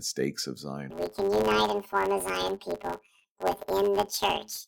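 From 0.90 s, just after "stakes of", to the end, planar audio read as interleaved splits each 10 ms block into doubled-speed halves, giving a robotic 100 Hz buzz rather than an octave jump.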